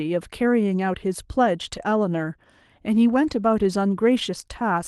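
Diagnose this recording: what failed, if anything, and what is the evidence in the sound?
Nothing failed at any stage: the speech arrives through Opus voice compression at 24 kbps in hybrid mode with the full band kept, and the codec leaves only a light trace on it.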